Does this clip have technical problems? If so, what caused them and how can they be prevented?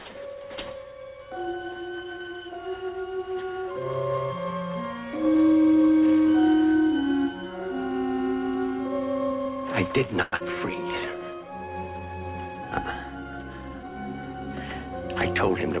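Yes. A call audio freeze runs from 10.22 to 10.34 s. The last sound is stretched into a fading buzz for about 0.1 s, most likely because packets were held up and the jitter buffer ran dry. Playback then resumes where it stopped, so nothing is lost, but the audio now runs about 102 ms late. A more adaptive jitter buffer and a less congested network path would prevent this.

A short concealed packet loss follows at 10.36 to 10.42 s. About 80 ms of audio never arrives. The receiver covers 40 ms of the hole by extending the preceding sound, heard as a brief smear, and drops the rest to recover some of the earlier delay. Forward error correction or redundant packets would let the receiver rebuild the missing audio instead of guessing it.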